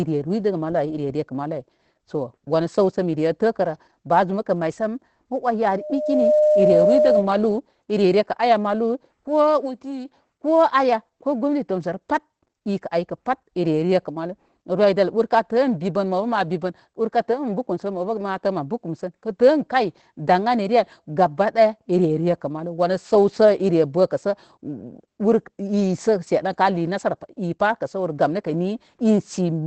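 From the start and throughout, a faint hiss and grittiness rides on the speech, thickening on loud and bright syllables and disappearing in pauses. This is sample clock jitter: the converter's timing wanders by a few microseconds, so fast-moving parts of the waveform are mismeasured, leaving an error about 35 dB below the signal.

Also running the whole way through, the speech sounds muffled, hoarse and faintly robotic, with nothing above 8.6 kHz. That is Opus voice compression in its SILK linear-prediction mode at wideband, and the plainly audible coarseness fits a low bitrate around 12 kbps in 20 ms frames.

From 5.63 s to 7.30 s, a steady 606 Hz tone swells up over under a second into a squeal that ends up about 5 dB louder than the speech. This is loudspeaker feedback squeal: the microphone heard its own loudspeaker, and the loop gain at that frequency exceeded one.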